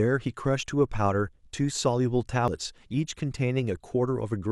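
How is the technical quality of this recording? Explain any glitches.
The recording has one glitch, a brief burst of damaged data in a compressed stream at 2.48 s. Part of the encoded speech was corrupted, so the decoder misread those frames and lost sync while hunting for the next valid frame header. It is heard as a short chirp, squawk, click or hole in the speech.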